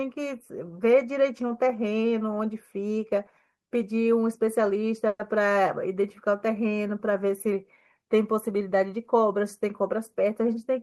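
Speech with two delivery faults. From 5.07 to 5.22 s there is a call audio freeze: about 120 ms of fading buzz continues the last sound, then 30 ms of silence. This was likely caused by delayed packets draining the jitter buffer. Nothing is lost, but the speech resumes about 120 ms late. From 10.21 to 10.78 s a jitter buffer speed-up plays the audio at 106% speed with unchanged pitch. Short pitch-period slices totalling roughly 40 ms are cut to shed the accumulated delay, so the speech sounds slightly hurried.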